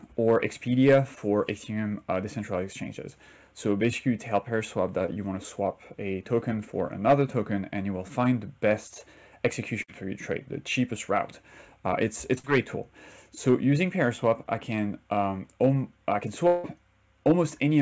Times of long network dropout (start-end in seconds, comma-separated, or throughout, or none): 16.47-16.66